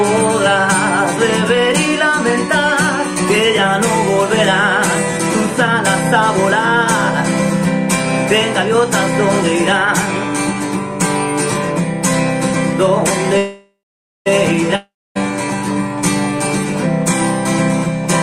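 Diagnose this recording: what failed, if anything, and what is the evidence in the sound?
A call audio freeze sits in the network stage, from 13.37 to 14.28 s. The last sound is stretched into a fading buzz, then about 0.5 s of silence, and the audio resumes exactly where it stopped. That points to a jitter buffer that likely ran dry while packets were delayed, adding about 0.88 s of lag.

A long network dropout follows from 14.76 to 15.17 s, also at the network stage. The same fading fill decays into about 0.27 s of silence, but here the audio comes back further along, with about 0.4 s skipped. That loss, rather than a pause and resume, sets it apart from the freeze and suggests packets that were likely never delivered.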